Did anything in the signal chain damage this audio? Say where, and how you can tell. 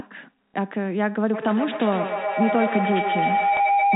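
Yes, at two stages. At the network stage there is packet loss with the last packet repeated: at 0.53 s about 60 ms of audio was lost, and at 3.57 s about 30 ms. The receiver filled each gap by replaying the last packet it had. Both gaps fit a 30 ms packet size. The first gap sounds like a brief robotic stutter, and the second like a small blip. On a waveform it shows as one short block copied end to end. On a spectrogram it shows as a comb-like buzz near 33 Hz.

In call processing there is a feedback howl from 1.33 s to the end of the clip. A microphone-to-loudspeaker loop gains level on every trip, so each repeat grows instead of fading and narrows to the frequency the loop favours. Here that is roughly 700 Hz, pulsing about every 150 ms, which matches the loop delay. At its loudest it sits about 2 dB above the speech. On a spectrogram it is a thick horizontal line near 700 Hz that brightens in regular beats. 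The telephone band-limiting from the G.711 coding is visible as nothing above 4 kHz.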